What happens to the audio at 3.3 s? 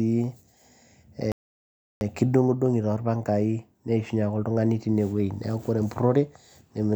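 Nothing goes wrong at 3.3 s: the speech continues without any dropout, click, distortion or other disturbance at that point.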